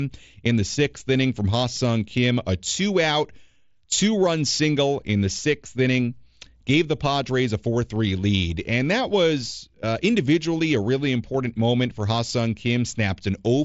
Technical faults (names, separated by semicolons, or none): none